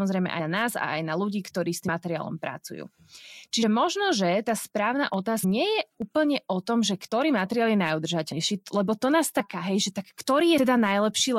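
A Slovak speech recording that jumps forward eight times where compressed frames are skipped: at 0.38 s (just before "na nás a aj"), 1.87 s, 3.62 s (before "možno že tá správna"), 5.43 s, 7.11 s, 8.32 s, 9.39 s (right after "lebo to nás") and 10.57 s. At each point a short stretch of speech, from a few tens of milliseconds up to roughly a third of a second, simply isn't there. On a spectrogram it shows as an abrupt discontinuity in the formant tracks. Separately, there are two isolated sharp clicks at 5.14 s and 6.02 s, likely from dropped samples, with well under a millisecond missing each time. Each appears as a thin vertical line spanning the whole spectrogram and a single step in the waveform.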